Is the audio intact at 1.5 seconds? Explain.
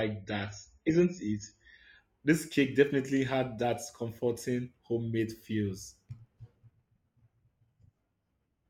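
No. An adaptive stream starting at a low bitrate covers 0.0 to 2.0 s: the player begins on a thin version, which fits roughly 16 kbit/s, leaving nothing above 7 kHz and heavier codec artefacts, then jumps cleanly to fuller quality.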